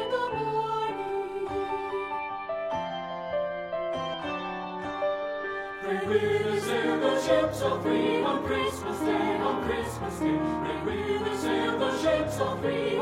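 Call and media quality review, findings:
Damaged data in a compressed stream, 4.09 to 4.15 s: brief glitch lasting about 60 ms. Probable component: decoder input, stream or file transport. Mechanism: corrupted or missing bytes in the encoded frames; decoder misreads them, loses frame sync and hunts for the next valid header, emitting garbled output until it locks again.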